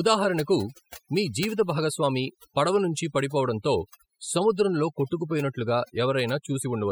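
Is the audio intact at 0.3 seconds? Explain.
No, overdone noise removal runs through the whole clip, so at 0.3 s aggressive band-by-band suppression empties the background into twinkling specks and takes quiet parts of the speech with it.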